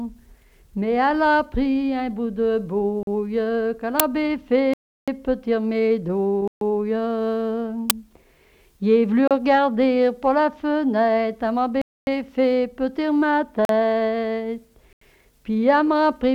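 Blocks of digital silence hit at 3.03 s, 4.74 s, 6.48 s, 9.28 s, 11.82 s, 13.65 s and 14.93 s. Output buffers went unfilled and were zeroed. Short ones are short holes. The 0.34 s and 0.26 s gaps are clear holes. The 0.34 s gap and the 85 ms gap at 14.93 s fit 48 kHz blocks of 16384 and 4096 samples. Uninitialised buffers crack at 4.00 s (5 ms) and 7.90 s (10 ms). Leftover memory played as audio. Each is a loud crack.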